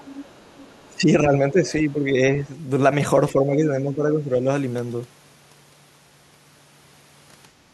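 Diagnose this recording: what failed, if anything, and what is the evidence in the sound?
Other side's voice leaking through, 0.0 to 1.0 s: a faint second voice about 25 dB under the talker, likely loudspeaker echo left behind by call processing.

Speech suppressed in double talk at 0.88–1.35 s, 1.51–2.49 s and 3.32–4.47 s: the voice dips by up to about 15 dB, likely the canceller ducking overlapping talk.

Background gated by the echo canceller from 7.56 s to the end: room sound drops about 6 dB as call processing clamps the microphone during loudspeaker playback.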